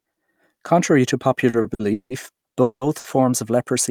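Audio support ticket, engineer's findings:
Speech drags and stutters 1.49–2.12 s: four held-over gaps, longest 170 ms, about 290 ms filled. Repeated stalls (stutter), jitter buffer repeatedly draining as packets arrive late.

Sound holds as a fading buzz or hiss, then about 80 ms silence, 2.62–2.83 s, resuming where it stopped. Call audio freeze, likely network delay emptying the jitter buffer for about 190 ms.

Sound stretched with a slight buzz or dip, 2.99–3.06 s, about 50 ms. Short stall from a late packet: jitter buffer empty, receiver extended the last sound until it arrived.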